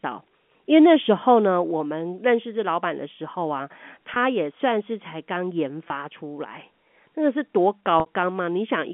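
Speech over a G.711 telephone line, band-limited to roughly 200 Hz to 3.4 kHz. Packet loss with pitch repetition struck three times: the receiver patched each gap by repeating the last pitch period. The gaps at 4.14–4.16 s and 5.88–5.90 s each lasted 20 ms and come across as a brief held, buzzy tone. The longer 60 ms gap at 8.00–8.06 s, consistent with three consecutive packets lost, fades into silence before the speech returns with a short cross-fade.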